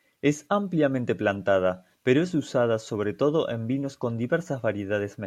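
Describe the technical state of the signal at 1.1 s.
At 1.07 s, compressed frames are skipped. About one frame of audio, roughly 20 ms, never plays. The speech jumps straight ahead to "plantada pero es usada".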